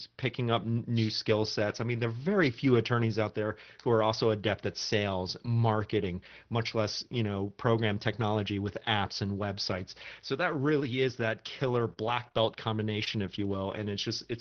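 Between 11.65 and 13.78 s, scattered short gaps appear. About four small holes open in the speech stream, the longest around 30 ms. Together they lose 80 ms of audio. The receiver hides each one by carrying the last sound forward, and that patching spreads over 240 ms. The result is a few brief ticks, smears and hiccups. The speech stays mostly clear between them. The call path's band limit sits near 6 kHz throughout.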